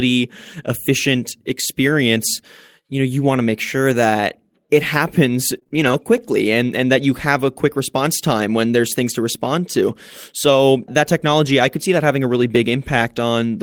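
Right after "sure that it happens", from 5.55 to 6.02 s, you get repeated packet loss, the robotic kind. There are three holes in that half-second, the longest 28 ms, and about 14% of the span is papered over by stretching the last bit of sound forward. Roughly a fifth of a second ends up rebuilt, so the speech turns choppy, with slivers just gone.

Then at 6.18 s, just before "and and that you", there's a block of digital silence. It's only about 0.73 ms of silence, which fits a 32-sample buffer that didn't get filled in time. The signal drops straight to nothing and snaps back with no fade, so what you actually hear is a tiny tick rather than a gap.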